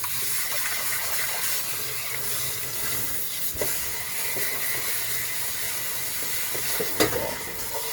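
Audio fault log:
throughout, Opus compression: tonal parts of the sound come out noisy, rough and grainy rather than swirly, and the damage is plainly audible even though the band stays full, reaching about 20.1 kHz. This is likely Opus compression in its music (CELT) mode at a low rate, consistent with roughly 24 kbps. With too few bits, the encoder preserves each band's energy but fills its detail by folding lower bands or injecting noise, which roughens tones without opening gaps.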